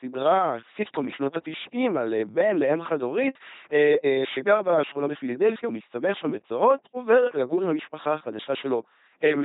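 Throughout, the speech carries heavy LPC-10 vocoder damage: buzzy robotic pulses or hiss replace natural voicing, consistent with 2.4 kbit/s coding. Spectrograms show rigid harmonic striping and nothing above 3.8 kHz.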